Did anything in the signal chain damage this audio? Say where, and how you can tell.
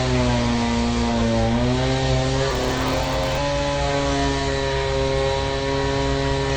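Yes. Throughout the clip, the whole sound is band-limited. What remains has plainly audible codec damage: it is dull and smeared, and sustained and hissy parts warble and fizz. This points to the codec stage, likely AAC compression (AAC-LC) at a low rate, which fits about 32 kbps. At that rate the encoder lowers its cut-off and quantises the frequency lines coarsely, leaving holes and noise-filled bands that cause this texture.

From 2.5 s to 3.38 s there is a block size mismatch (padded) in the driver or buffer stage. A steady buzz at 93.8 Hz rides on the sound, and that stretch runs slower, at 0.938 of normal speed. This fits a stage that reads 512-sample blocks while the stage feeding it writes fewer samples. Each block is then padded with zeros, so a short silent gap repeats at the block rate, heard as the buzz, and the added gaps stretch the timing.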